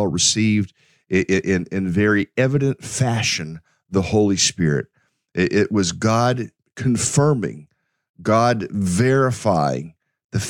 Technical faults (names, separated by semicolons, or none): none